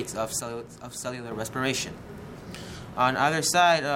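From 0.40 s to 1.32 s the audio falls abruptly by about 6 dB, then snaps back, likely because one channel drops out before the mono sum. The waveform shrinks to half height with square edges, and a spectrogram dims evenly across all frequencies.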